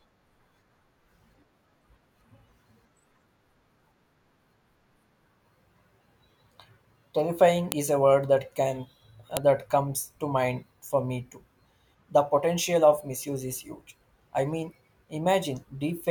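A speech recording with two sharp, loud clicks at 7.72 s and 9.37 s: file header played as audio, where joined WAV pieces kept their header bytes, which then sounded as samples.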